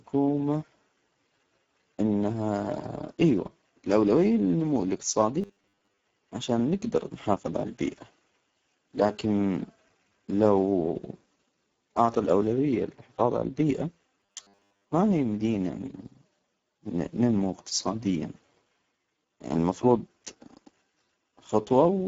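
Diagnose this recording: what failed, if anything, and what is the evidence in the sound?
The codec stage is the big one: it's Speex, and the damage is plainly audible the whole way through. The speech comes out hoarse and noisy, which fits a low setting somewhere near 10 kbps, and the top band above 8 kHz is just a shaped hiss.

Then there's robotic sound from repeated short buffers, at 5.42 to 6.02 s (between "إيوة الأولوية للنمو" and "عشان نجدر نحافظ على") and 14.21 to 14.89 s. Both have a rigid 100 Hz metallic buzz. That's likely a driver or buffer underrun looping about 10 ms chunks, replacing roughly half and then most of the real audio.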